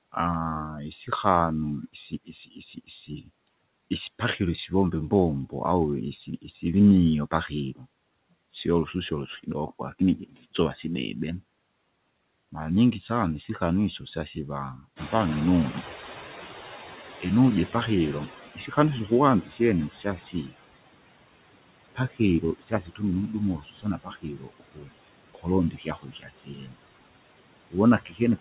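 Noise suppressor artifacts run through the whole clip: steady noise is pulled down by about 20 dB between phrases. On a spectrogram, the background looks patchy and speckled rather than even.

From 1.93 to 3.29 s the noise suppressor cuts speech, mistaking soft parts for noise. About 0.3 s in total is swallowed, with drops of about 15 dB. The waveform shows sudden dips inside the speech envelope.

From 9.43 to 10.45 s the same kind of speech cut recurs. It is shorter, roughly 0.15 s in total, and reaches about 14 dB.

At about 15 s the room noise jumps by about 15 dB. From 14.96 to 20.36 s the noise suppressor is catching up: its noise estimate lags, so the noise comes through with less reduction at first. It then sinks over 5.4 s toward about 14 dB of reduction. The spectrogram shows a bright noise floor that fades gradually. Across the whole clip, the G.711 call path leaves nothing above 4 kHz.

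Overlapping that recovery, from 18.29 to 20.53 s, the suppressor cuts speech again. About half a second fades, by up to about 16 dB.

The heaviest speech cut by the noise suppressor falls between 21.95 and 26.76 s. Roughly 2 s of speech sounds swallowed, with drops reaching about 20 dB. The spectrogram shows harmonics vanishing in blotches.

A final cut runs from 27.70 s to the end, dipping by about 19 dB.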